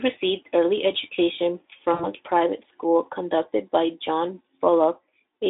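A speech recording carried over a narrowband Speex VoIP line shows a gap from 1.94 to 2.07 s where the voice smears into a buzzy tone or coloured noise that fades and stays weak briefly afterward. This is VoIP packet loss concealed by the speech codec: about 60 ms of audio went missing, which fits three lost 20 ms frames. The decoder extended its last pitch and filter at falling gain until recovery.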